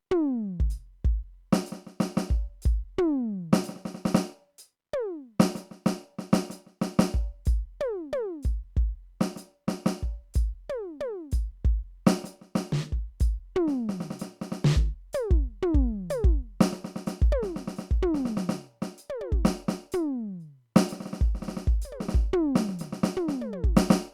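No technical faults are audible anywhere in the music.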